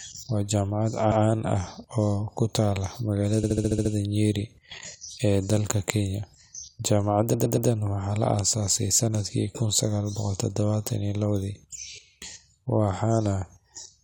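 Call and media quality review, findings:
Repeated frames, speech stream. 1.10–1.22 s: one ~116 ms block replayed once. 3.43–3.91 s: ~70 ms block looped seven extra times, audible stutter, adds 0.49 s. 7.33–7.68 s: ~116 ms block replayed three extra times, adds 0.35 s. Probable component: encoder output or packetizer resending compressed frames. Identical copies and a longer timeline, unlike concealment repeats, which fade and keep timing.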